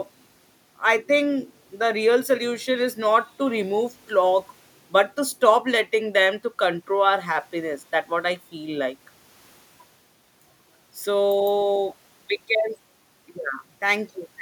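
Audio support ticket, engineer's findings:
No faults found on listening; no action required.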